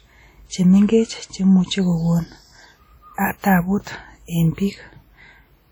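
Throughout the speech, the sound rings and smears, with a washy hiss breathing along with the signal. This is likely heavy WMA compression at a bitrate around 32 kbps. A spectrogram shows patchy, gapped bands and energy blurred over tens of milliseconds around onsets.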